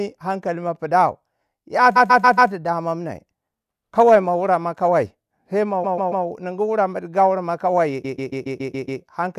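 A short run of compressed frames in this speech clip was written or sent more than once, giving repeated frames at three points. The decoder plays the same 0.14 s block over again, which fits a run of six frames. It repeats four extra times from 1.95 to 2.51 s, three times from 5.83 to 6.25 s, and seven times from 8.04 to 9.01 s. Each one is heard as a mechanical stutter, and the repeats add 0.56, 0.42 and 0.98 s to the audio.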